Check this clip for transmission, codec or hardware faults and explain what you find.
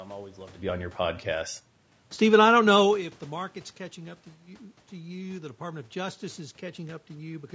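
One codec fault runs through the whole speech clip: low-delay AAC compression. Voiced sounds come out rough and grainy, with noise filling the gaps between harmonics. The likely cause is AAC-ELD at a low rate, which fits roughly 32 kbps. Its short frames blur pitch detail. Unlike packet loss, there are no dropouts or glitches, just steady texture damage.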